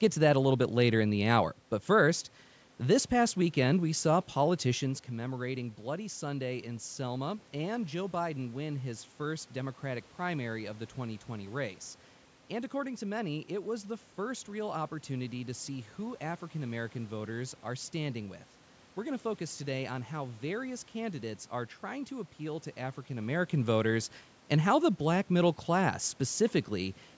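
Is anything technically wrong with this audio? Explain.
No, the speech shows no technical fault: the band-limit near 8 kHz and the trimmed low bass come from normal call microphone processing, the background noise belongs to the room, and the level shifts around 4.5 s and 23 s are the talker moving relative to the microphone.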